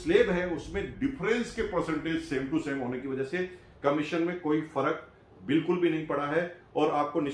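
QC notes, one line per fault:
0.94–3.02 s, wrong sample rate: the sound slows and drops in pitch together, running at about 0.92 times normal speed and roughly 1.5 semitones flat, then snaps back to normal at 3.02 s. The samples are being clocked out more slowly than they were captured, with no resampling, so timing and pitch shift by the same ratio. That ratio fits audio recorded at 24 kHz being played back at 22 kHz.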